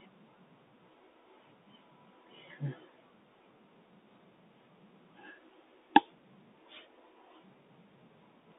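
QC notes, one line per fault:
Throughout: Bluetooth CVSD headset codec. The speech is squeezed into a narrow phone-like band, about 250 Hz to 3.7 kHz, so it sounds thin and boxed in. Each sample is coded as a single up-or-down step that adapts its size, which fits a 64 kbps stream. Fast, loud high sounds outrun that step and distort. S sounds turn scratchy. A granular hiss sits under the speech. The damage is plainly audible.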